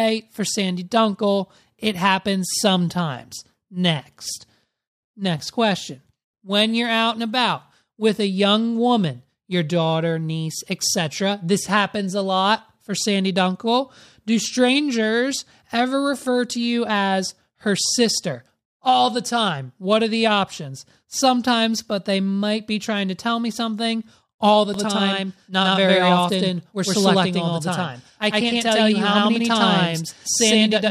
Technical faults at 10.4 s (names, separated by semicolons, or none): none